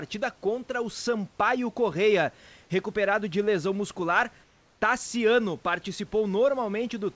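From 4.44 to 4.82 s, comfort noise replaces the background: room noise gives way to flat, featureless hiss about 3 dB quieter, likely from discontinuous transmission during the pause.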